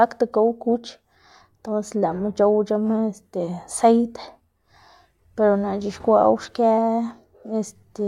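No dropouts, clicks, distortion or other technical faults can be heard anywhere in the recording.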